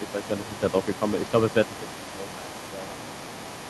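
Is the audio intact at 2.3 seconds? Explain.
No. At 2.3 seconds there is other side's voice leaking through, and it runs the whole clip, from 0.0 to 3.69 s. A second voice sits under the main speech, roughly 15 dB quieter. It sounds faint and separate from the talker. The likely cause is echo from a loudspeaker. The far end plays aloud on the talker's device and reaches the microphone. The echo canceller fails to strip all of it out.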